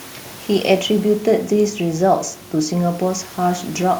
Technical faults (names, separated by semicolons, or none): none